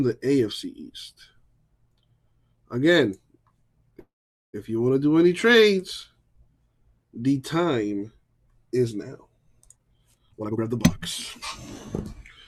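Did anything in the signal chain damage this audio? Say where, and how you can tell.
Yes. A call audio freeze at 3.99–4.55 s, likely a network stall emptying the jitter buffer: a short fading buzz, about 0.45 s of silence, then resumption with nothing lost, unlike a dropout.

A jitter buffer speed-up at 9.75–10.97 s: repeated pitch-period cuts remove roughly 0.4 s, so the sound plays at 134% with unchanged pitch, unlike a resampling speed error.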